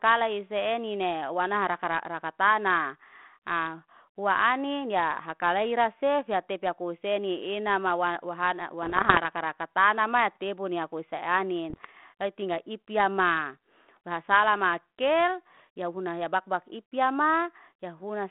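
Bit errors on an ADPCM link, at a rate of about 0.7 percent, upset the decoder's step size and predictor at 8.83–9.25 s, 11.70–11.89 s and 15.55–15.60 s. Each one produces pops and rough, uneven bursts. The narrow telephone band around them comes from a 32 kbit/s G.726 link.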